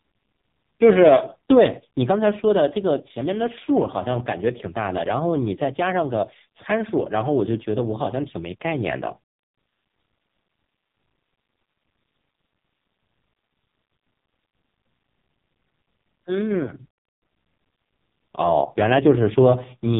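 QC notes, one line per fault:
Throughout: AMR narrowband mobile codec, heavy damage; buzzy, synthetic speech with nothing above 3.8 kHz, which points to AMR-NB at about 5 kbps.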